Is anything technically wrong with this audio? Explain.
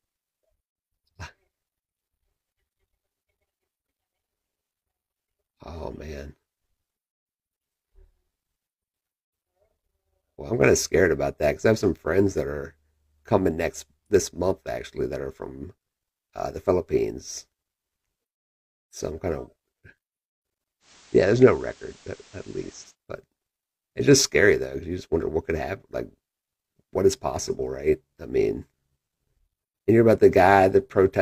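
Yes. From 20.80 to 22.96 s the speech shows digital radio blending to analogue: the receiver lost its digital stream and cross-faded over 113 ms to the FM broadcast. Hiss rises to roughly 25 dB below the signal, and level drops about 2 dB. A spectrogram shows a raised noise floor.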